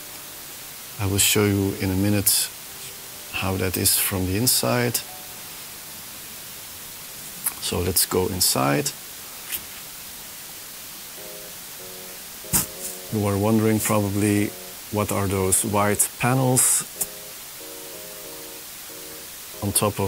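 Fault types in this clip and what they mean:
Low bit depth with dither: 6-bit rounding with dither gives a steady, even hiss only about 15 dB below the signal, a flat full-band spectrogram floor, and a fuzzy waveform baseline.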